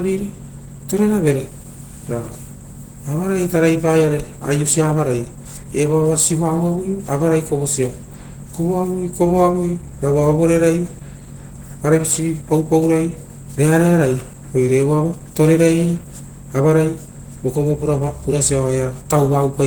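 Throughout the speech, a muffled, hoarse, grainy roughness sits on every sound, likely Opus compression in its hybrid speech mode at a rate that fits about 16 kbps. Unlike MP3 damage, it swirls less and leaves few holes; content still reaches 20.1 kHz, just coarsely filled.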